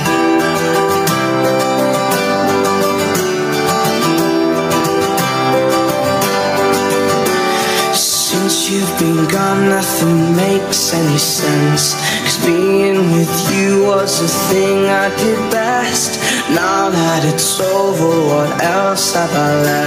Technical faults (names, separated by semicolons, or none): gain pumping